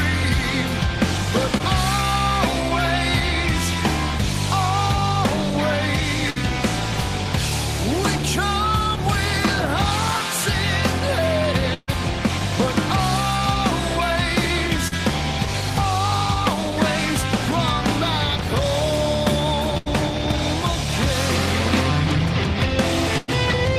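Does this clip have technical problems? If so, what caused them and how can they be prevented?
Yes. There are two kinds of fault, both from lost network packets.

Short concealed packet loss occurs at 1.57 s and 14.88 s. The first gap lasts 20 ms and the second 40 ms. That audio never reached the decoder in time. The receiver covered each hole by extending the sound just before it, then blended back into the real signal. Each one is heard as a brief smear or wobble. A larger jitter buffer, forward error correction and a steadier connection would prevent these.

A burst of packet loss occurs four times: at 6.30 s for about 60 ms, at 11.74 s for 140 ms, at 19.77 s for 80 ms, and at 23.18 s for 100 ms. Several packets in a row were lost or arrived too late to play. The receiver continued the last sound and faded it, giving a held buzz or fading hiss. The longest gap, at 11.74 s, ends in about 10 ms of silence. 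Each time the audio resumes further on, with the middle missing. Fixing congestion on the network path would prevent these. So would prioritising the audio traffic and adding packet redundancy.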